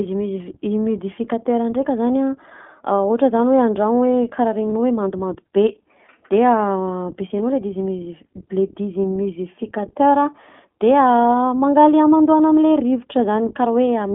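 From start to finish the speech runs through the iLBC codec, and its damage is plainly audible. Only about 150 Hz to 3.5 kHz gets through, so voices sound thin and boxed-in, with a slightly rough, synthetic grain. The codec rebuilds each 20 ms frame's excitation independently, which fits its 15.2 kbps mode. A spectrogram shows a hard ceiling near 3.5 kHz with nothing above it, a trimmed low end, and smeared, slightly noisy harmonics.

At 4.70 s a single iLBC frame is lost, leaving 20 ms with no real data. The decoder fills the hole by repeating the last pitch cycle blended with noise, which sounds like a brief buzzy catch in the voice. Because each frame decodes on its own, the speech is clean again immediately. On a waveform this shows as one short stretch of near-identical repeating periods. On a spectrogram it is a thin vertical sliver where the harmonics look frozen and fuzzier.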